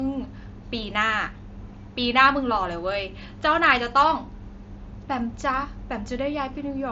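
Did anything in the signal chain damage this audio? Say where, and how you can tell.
No, the speech comes through an intact chain, with the mSBC Bluetooth headset codec audible only as the expected wideband ceiling, with nothing above about 7.7 kHz, and a faint graininess consistent with its fixed bit pool.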